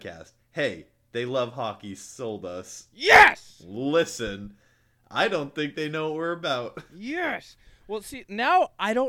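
No technical faults can be heard anywhere in this speech recording. There is no moment that needs a timestamp or an explanation.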